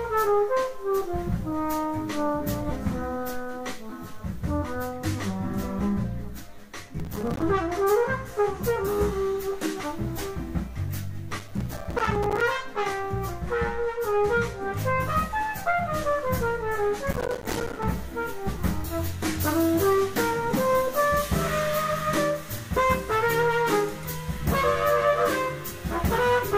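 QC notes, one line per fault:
6.99–7.42 s, 11.31–12.41 s, 17.11–17.85 s: processor overload crackle. In each burst, roughly 20 to 70 audio buffers a few milliseconds long miss their deadline and drop to silence with hard edges, producing gritty crackle. The waveform shows rapid notched gaps, and the spectrogram shows dense vertical broadband streaks.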